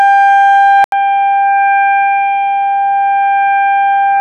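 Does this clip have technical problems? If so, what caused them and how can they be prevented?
Yes. At 0.84 s, after an 80 ms gap, the sound turns dull, slightly quieter and faintly hissy, with nothing above 3.8 kHz, likely from an input switched to a poorer, narrower-band device. Locking recording to one fixed microphone and disabling automatic device or headset call-profile switching prevents this.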